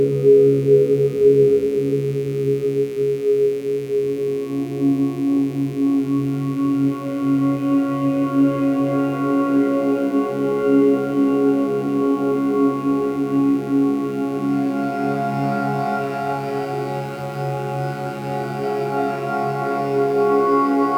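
A mains buzz runs through the whole clip. Sharp switching spikes, likely from a dimmer, rectifier or poor shielding, enter twice per cycle of the 60 Hz supply. Their harmonics stretch into the kilohertz range. The result is a steady, raspy buzz, roughly 30 dB below the sounds.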